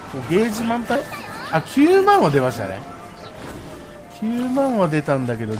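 At 0.95 to 0.97 s a skip ahead occurs: roughly 0.4 s of audio was discarded while later material was already queued, so playback leaps forward with no filler. The sound on either side is spliced together abruptly, leaving an audible jump in continuity.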